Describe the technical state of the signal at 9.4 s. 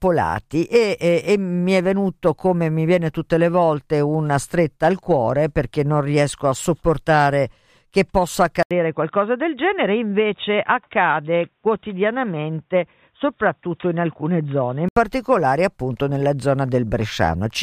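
At 9.4 s the speech sits inside a stretch from 8.63 to 14.96 s where the input was likely switched to a poorer device, just after "a sopportare che possa". A gap of about 80 ms marks the switch, and the sound turns dull and boxy because nothing reaches above 3.8 kHz. The level stays roughly the same, and a new noise floor sits around 50 dB down. A spectrogram shows a flat ceiling at 3.8 kHz, and the waveform shows a brief dropout at 8.63 s.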